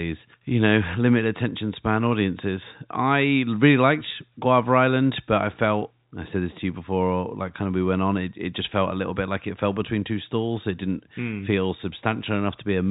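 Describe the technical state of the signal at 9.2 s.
At 9.2 s the speech is intact with no fault present, carried in the narrow band of G.711 telephone coding with nothing above 3.8 kHz.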